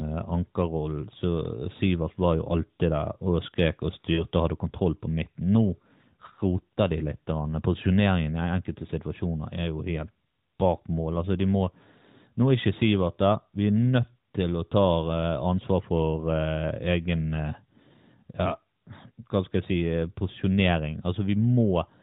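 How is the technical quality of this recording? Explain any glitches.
The speech comes through a narrowband mobile link, with two short dropouts from lost AMR speech frames. The band stops at 4 kHz, and the codec's light coloration fits the 12.2 kbps AMR-NB mode.

The first glitch runs from 1.78 to 1.83 s. It sounds like one missing 20 ms frame. The second runs from 4.14 to 4.24 s and fits two frames, about 40 ms. The decoder repeats the last good pitch and vocal tract settings at falling gain. You hear a brief dip and warble, longer and more smeared at 4.14 s.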